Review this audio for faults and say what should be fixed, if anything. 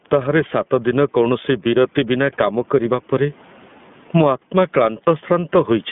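Gain pumping: a swing of roughly 15 dB that flattens the dynamics. This is likely excessive input gain driving a fast limiter. Lower the microphone gain so the limiter rarely engages.

iLBC codec: the whole clip is confined to about 150 Hz to 3.5 kHz, with a rough, synthetic edge. This fits iLBC's 30 ms frame mode at 13.33 kbps. Use a wideband codec where the link allows it.

Lost iLBC frames: from 5.04 to 5.08 s, one 30 ms frame was concealed by a brief, slightly buzzy or breathy held repeat of the last pitch cycle, and the voice resumes right after. Add jitter buffering or redundancy to reduce packet loss.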